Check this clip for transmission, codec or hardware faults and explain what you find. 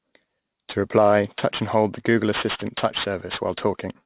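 One fault runs through the whole speech clip: aliasing. The sound fits a drop from 48 kHz to 8 kHz without an anti-alias filter, so energy above 4 kHz folds back below it, roughly 15 dB under the speech. Sibilants turn gritty and metallic, with content pressed hard against 4 kHz. A properly filtered rate drop would sound muffled but clean, without these false tones.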